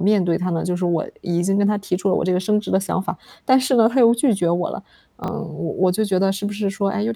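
At 5.24 to 5.28 s the speech has chunks out of order. One 20 ms block of audio arrived one chunk late and plays after the block that should follow it, so the two are swapped. Nothing is missing, but the speech briefly jumbles across the three hard joins. On a waveform, abrupt discontinuities mark each 20 ms boundary. On a spectrogram, thin vertical broadband lines appear there, and the formant tracks jump back and forth rather than flowing.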